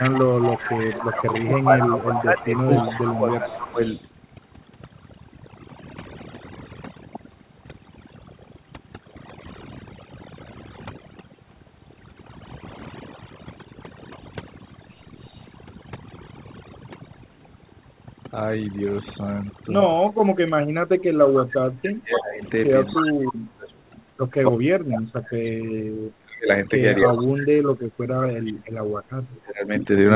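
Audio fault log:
throughout, overdone noise removal: A noise reducer set far too strong pushes single frequency bands down or off wherever they sit near its noise estimate, taking quiet parts of the speech with them. The background drops and breaks up into twinkling specks.
0.00–4.11 s, 15.17–15.57 s, 21.34–24.02 s, 26.98–27.23 s, echo leak: A delayed copy of the speech, 287 ms late each time, comes back, likely because a loudspeaker-side echo canceller left residue. It sits about 10 dB below the speech in the first and third stretches, about 30 dB below at 15.17 s and about 15 dB below at 26.98 s.
0.11–3.79 s and 20.24 s to the end, speech suppressed in double talk: With both sides talking at once, the echo canceller likely could not tell its own talker from echo and attenuated both. The speech dips and cuts out in pieces, by up to about 15 dB over roughly three seconds early on and by up to about 35 dB from 20.24 s.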